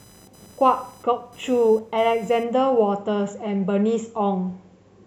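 Computer activity noise runs from the start to 2.96 s as a thin, buzzing chirp pulsing at around 1 kHz, roughly 30 dB beneath the speech. Changing processor or graphics load shifts the ground shared with the audio circuit, so the interference follows the machine's workload, not the speech.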